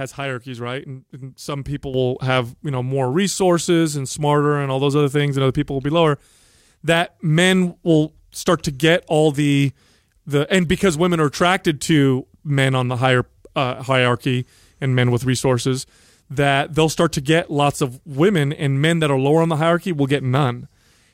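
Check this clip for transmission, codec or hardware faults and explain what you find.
One fault is present. Sudden gain jump at 1.94 s, lasting to the end of the clip: the speech and its background noise step up together by about 9 dB in a single sample, with no ramp. That is likely a gain setting or bit shift applied abruptly in the digital path.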